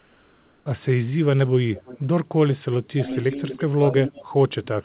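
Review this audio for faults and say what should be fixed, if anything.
From 0 to 0.66 s the real background is replaced by comfort noise. It is a steady, featureless noise, about 3 dB quieter than the true background, which sits about 38 dB below the loudest speech. The likely cause is discontinuous transmission, with the receiver synthesising noise during the pause. Disabling discontinuous transmission, or improving the comfort-noise updates, would keep the real background.

An echo leak appears from 1.74 to 2.0 s and again from 3.22 to 4.25 s. A delayed copy of the speech trails 324 ms behind. It sits around 20 dB down at first, then around 15 dB down. The far end's echo canceller likely let loudspeaker sound through its microphone. Better echo cancellation or a headset at that end would stop it.

Speech is suppressed in double talk twice. From 2.94 to 3.42 s it dips in pieces, around 0.2 s in total, falling up to around 20 dB. 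From 3.75 s to the end it drops as much as around 35 dB. An echo canceller likely mistook the talker for echo while both sides spoke. Tuning its double-talk detection would keep the talker audible.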